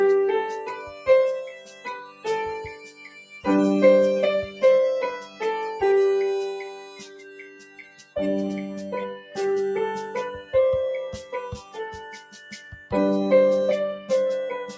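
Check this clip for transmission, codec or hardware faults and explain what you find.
A speech-oriented noise suppressor has been left running on this audio and is the main fault. It reshapes the level constantly rather than failing at one point, and the band above 8 kHz is absent, which fits the call microphone processing the signal passed through.

Noise suppressor applied to music or sounds: Throughout the clip, held and fading material swings in level by around 10 dB. The suppressor treats steady tones and decaying tails as background noise and pulls them down, while sharp onsets slip through. The result is a pumping, fluttering, thinned texture. Unlike compressor pumping, which is triggered by loud peaks, this ducking follows how steady the sound is, so the quiet sustained parts are the ones that sink.

Sound cut by the noise suppressor: Distinct dips fall at 0.63–2.26 s (about 14 dB, the deepest), 2.71–3.4 s (about 12 dB), 4.47–4.63 s (about 8 dB), 5.18–5.42 s (about 10 dB), 6.7–8.16 s (about 12 dB), 9.19–9.37 s (about 8 dB), 11.23–11.77 s (about 8 dB) and 12.16–12.92 s (about 10 dB). 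In each, sustained sound is attenuated or its decay is cut short, yet the signal never drops to silence. That distinguishes these dips from packet-loss dropouts, which leave abrupt gaps or repeated fragments.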